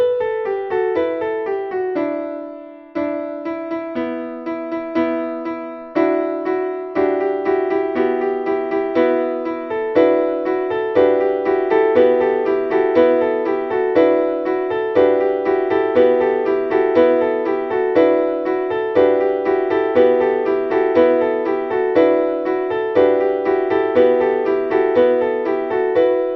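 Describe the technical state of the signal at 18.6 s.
At 18.6 s the signal carries a doubled audio track, as it does throughout the clip. The same audio is likely being picked up twice, once by a slower second path, so two copies are mixed out of step. A full-band duplicate trails the original by about a second at roughly the same loudness, with no decay or room colouring, so every sound is followed by a clean, equally strong repeat.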